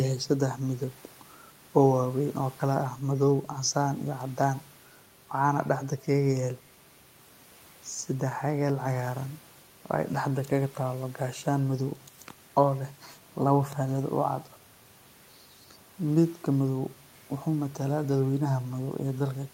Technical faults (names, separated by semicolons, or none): none